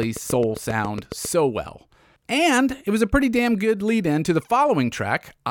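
From 0.03 s to 1.26 s the speech carries a train of clicks, about ten sharp pulses arriving at a steady 7.4 per second and peaking a few dB above the speech itself. They sound like an even ticking laid over the voice and persisting through its pauses. The likely source is interference from nearby equipment or a faulty connection or power supply. A waveform shows evenly spaced narrow spikes, and a spectrogram shows matching thin vertical lines spanning the full frequency range.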